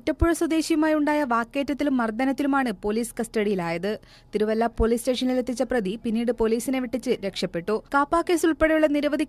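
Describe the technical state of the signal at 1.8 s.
At 1.8 s the signal is intact, with no audible fault at that point.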